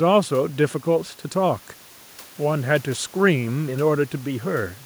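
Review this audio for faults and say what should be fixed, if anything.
Nothing to fix: no faults are audible, and the room's background noise sits about 28 dB below the speech as part of the recording itself.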